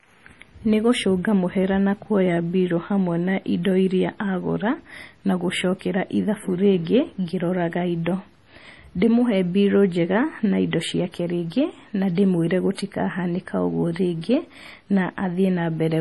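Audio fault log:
Throughout, MP3 compression: heavy watery swirl, nothing above 11.5 kHz; unlike plain filtering, weak components flicker frame to frame, likely a bitrate near 32 kbps.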